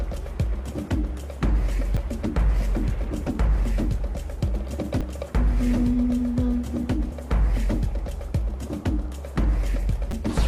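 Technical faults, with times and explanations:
1.97 s, 5.01 s and 7.12 s: damaged data in a compressed stream. Each is a brief glitch lasting only a few milliseconds, where corrupted bytes made the decoder misread a frame, lose its place and resynchronise on the next header.
10.10 to 10.13 s: damaged data in a compressed stream. A longer glitch of about 36 ms, as the decoder stays lost across more corrupted data before finding a valid frame again.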